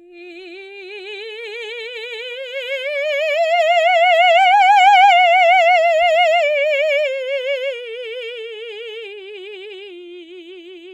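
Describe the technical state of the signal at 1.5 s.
At 1.5 s the music plays through intact, with no dropout, click, distortion or other audible fault.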